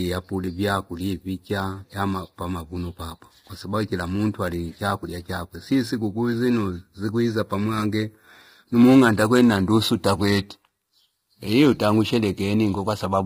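Speech runs for the full clip with heavy low-delay AAC compression throughout, likely from AAC-ELD at a rate that fits about 24 kbps. The voice sounds rough and grainy, with noise filling the gaps between pitch harmonics and a thin, artificial-sounding top band. What sets it apart from ordinary AAC damage is the poorly resolved harmonic structure: the codec's short frames, around 10 ms, cannot separate closely spaced harmonics, so roughness replaces the pre-echo and swirling of longer-frame coding.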